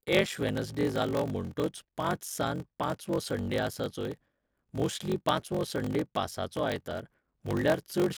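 Block size mismatch (padded) runs through the whole clip: each stage's shorter block is zero-filled to fit a read size that fits 1024 samples, leaving a gap every block. This puts a 46.9 Hz buzz under the speech and slows it to 0.861 times normal speed, at about normal pitch.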